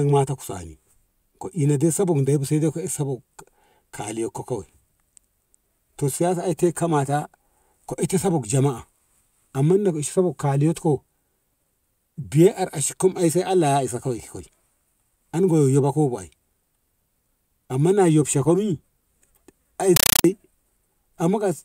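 An undecoded bitstream, a compressed stream played as audio, replaces the sound from 19.96 to 20.24 s with loud static chattering 31 times a second.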